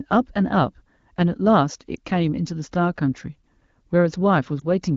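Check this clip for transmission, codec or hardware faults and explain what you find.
Two short transmission faults are audible, both lost AMR speech frames, at 1.96–1.99 s and 4.60–4.64 s. Radio errors corrupted the data so a frame failed its checksum, and the decoder covered the gap by repeating the previous frame's pitch and vocal tract settings at reduced gain. Each gap lasts about 20 ms, consistent with a single lost frame, and sounds like a brief dip or warble before the speech resumes. The surrounding audio has the clean quality of AMR-WB wideband speech, which fits a rate around 12.65 kbit/s.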